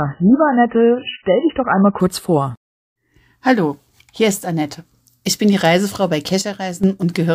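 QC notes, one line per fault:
0.0–2.0 s, adaptive stream starting at a low bitrate: player opened on a very low-rate MP3 version, stepping up around 2.0 s; until then nothing above 3 kHz, heavy codec artefacts, then an abrupt gapless lift in clarity.
6.42–6.84 s, sudden gain jump: level drops by about 8 dB at once, voice and background together, likely from an unramped digital gain change, then returns.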